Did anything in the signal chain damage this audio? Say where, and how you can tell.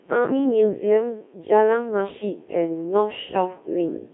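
Yes. Throughout, the speech sounds robotic and buzzy, confined to about 200 Hz to 3.7 kHz, with heavy codec damage. That is the Codec 2 vocoder at the codec stage, rebuilding speech from pitch, voicing and envelope parameters as sine waves, consistent with roughly 1.3 kbit/s.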